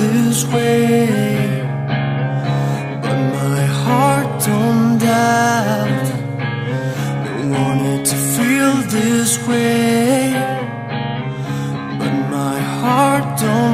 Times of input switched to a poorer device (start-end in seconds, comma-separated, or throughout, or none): none